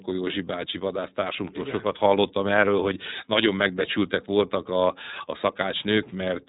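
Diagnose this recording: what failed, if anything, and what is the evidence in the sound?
The failure is at the codec stage: the speech has passed through the iLBC codec throughout. Nothing is heard above 4 kHz. The voice sounds rough and synthetic. Each frame is coded on its own, in a way that fits 30 ms frames at about 13.33 kbps.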